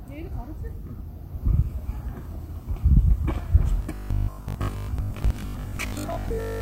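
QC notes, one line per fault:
3.83 to 6.60 s, robotic sound from repeated short buffers: the back part of the clip goes rigid and metallic, with a steady buzz at 50 Hz sitting on top of the sound while it still loosely follows its shape. The likely cause is audio arriving too slowly, so the player keeps looping a scrap about 20 ms long to fill the gaps. Most of that stretch is repeats rather than fresh audio.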